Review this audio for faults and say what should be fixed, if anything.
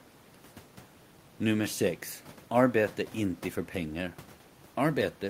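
Nothing to fix: no technical faults detected in the speech.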